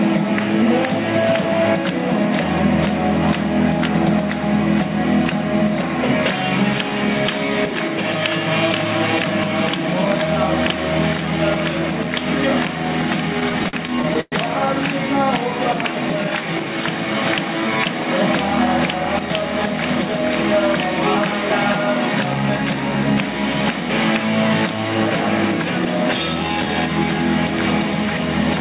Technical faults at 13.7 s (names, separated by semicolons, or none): repeated stalls (stutter)